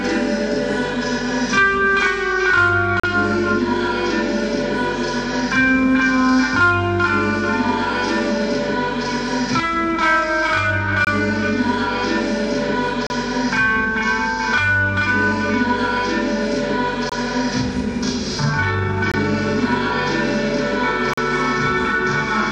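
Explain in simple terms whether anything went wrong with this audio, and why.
A doubled, slap-back quality runs through the whole clip, as if every sound arrives twice. This is a channel delay (doubling): one channel runs about 43 ms late, which fits a 2048-sample buffer, and when both channels are mixed together the late copy is heard as a separate echo.

There are also six brief, sharp dropouts into silence at about 3.00, 11.05, 13.07, 17.09, 19.12 and 21.14 seconds, each lasting roughly 22 to 41 ms. These are gaps between stream segments. The audio arrives in 2-second pieces, and where the timing between two pieces doesn't line up, the player fills the space with silence. Nothing is lost; the sound just pauses.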